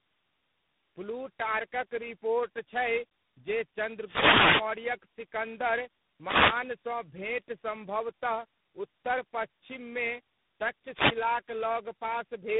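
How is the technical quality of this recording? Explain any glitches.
The quality is pretty rough, and the roughness runs the whole way through. It's tandem speech coding: the speech sounds like it went through several low-rate speech coders in a row, which fits a chain of G.726 at 24 kbit/s, AMR-NB at 6.7 kbit/s, and G.726 again, joined by plain G.711 hops. Each coder chews on the previous one's damage, so the speech ends up gritty, muffled and a bit warbly, with nothing above about 3.8 kHz.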